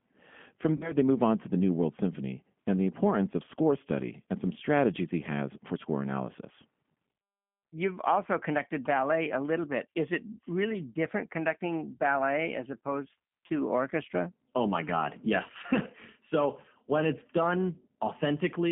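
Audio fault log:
throughout: G.729 codec. The sound is confined to a narrow telephone band of roughly 150 Hz to 3.4 kHz, with no air or sibilance above it. Each 10 ms frame is rebuilt from a vocal tract filter, a pitch predictor and a few pulses rather than the real waveform, so the speech has a plainly audible rough, slightly synthetic graininess, consistent with an 8 kbit/s G.729A link.
0.77–0.92 s and 13.46–13.53 s: VoIP packet loss concealed by the speech codec. In each case about 40 ms of audio, consistent with two lost packets, never arrived. The decoder filled the hole by continuing its last pitch and filter settings at falling gain, which stretches the sound into a buzzy tone or coloured noise that fades. Because each frame is built on the one before, the first event stays weak and distorted past the loss itself, to about 0.92 s.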